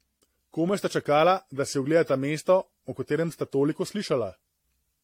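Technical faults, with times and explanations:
Throughout, generation loss: the speech has a swirly, smeared, hollow quality, consonant attacks are blurred, and nothing comes through above 16.6 kHz. That's more damage than a single encode would leave; it sounds like the audio went through a lossy codec about four times, likely AAC-LC at a rate that fits 64 kbit/s. Each re-encode quantises on a fresh frame grid, so the noise and spectral holes keep stacking up.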